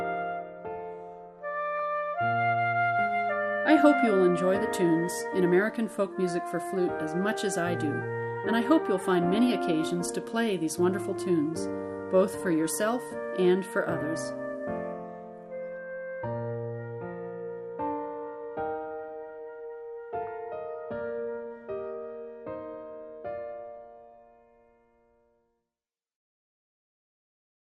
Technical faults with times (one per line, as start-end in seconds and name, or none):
0.00-27.73 MP2 compression
1.79 DAB burbling
20.27 DAB burbling